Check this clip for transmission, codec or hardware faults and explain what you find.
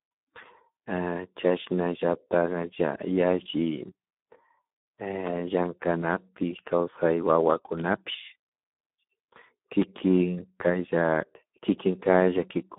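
Two faults are present: heavy Speex codec damage throughout and loud pops at two moments.

Speex codec, throughout: the speech went through a low-quality Speex encoding, consistent with roughly 8 kbps, that starves the excitation. The result is hoarse, noisy speech confined to 200 Hz–3.5 kHz, with nothing above 3.7 kHz.

Loud pop, at 7.8 s and 9.82–10.0 s: a sudden voltage pulse, likely from a plug, switch or static, lands on the signal. You hear one sharp pop at 7.8 s, then two in quick succession, each about 15 dB above the speech.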